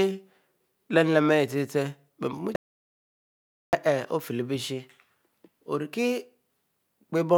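At 2.56 s the speech stops abruptly and the track falls to silence until 3.73 s, an audio dropout to silence lasting about 1.17 s. The input was likely lost, through a disconnected device, failed link or stray mute, while recording continued with silence. Unlike a natural pause or a noise gate, the gap carries no room tone or hiss at all, and speech is cut off and resumes mid-flow rather than fading.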